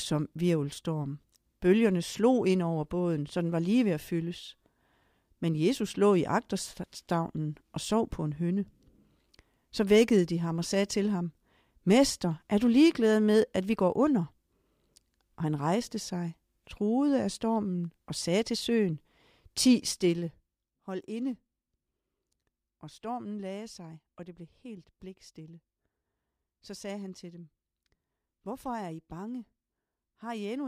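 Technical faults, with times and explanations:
19.88–20.69 s, zipper noise: the level drops by roughly 15 dB over this span, just before "hold inde", and the drop is applied as a staircase of coarse gain steps at around 30 per second rather than as a continuous ramp. Each abrupt step puts a small discontinuity into the waveform, and at that rate the discontinuities fuse into a ticking, zipping texture laid over the speech while the level moves.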